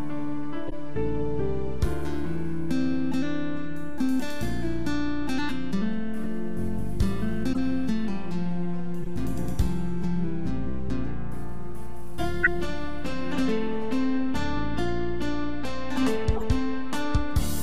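From start to finish the waveform sits off-centre, a DC offset that shifts every sample by a constant. It is inaudible, but it eats headroom, shows as a trace floating above or below zero, and appears as a steady bright line at 0 Hz.

Corrupt frames decoded anyway cause brief chirps and noise bursts at 0.68–0.73, 6.24–6.26, 7.53–7.58, 9.02–9.07, 12.43–12.47 and 16.36–16.43 s. Damaged codec data sends energy to the wrong frequencies, peaking near -5 dB at 12.43 s and elsewhere between about -15 and -30 dB. On a spectrogram these appear as short, sharp-edged vertical patches.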